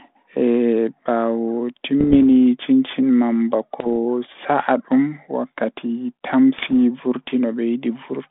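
Bit errors on an ADPCM link strike the speech three times: 2.00 to 2.19 s, 3.80 to 3.90 s, and 6.58 to 6.71 s, the last the densest. Each flipped bit knocks the decoder's step size and prediction off track, so the damage rings on briefly as pops, rough bursts and short jumps in level. The narrow band of about 150 Hz to 3.6 kHz points to a G.726 link at 32 kbit/s.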